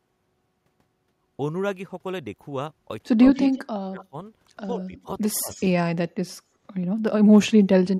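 From 3.18 to 3.41 s the speech dips slightly, by about 5 dB. This is speech suppressed in double talk, likely caused by an echo canceller turning the line down while both sides spoke. From 3.42 to 3.62 s a delayed copy follows, 137 ms late and about 10 dB below the speech. This is echo leak, likely loudspeaker pickup the far end's canceller failed to remove. From 3.65 to 4.14 s the speech cuts out almost completely, dropping about 35 dB. From 4.74 to 5.09 s it dips by about 10 dB. From 5.33 to 5.50 s it drops about 35 dB again. From 5.50 to 5.62 s a fainter echo returns, 140 ms late and about 25 dB down.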